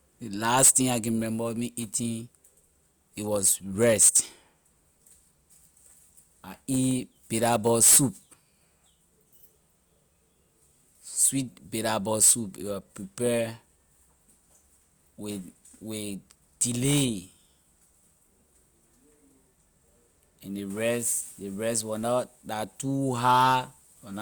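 No technical faults can be heard in the recording.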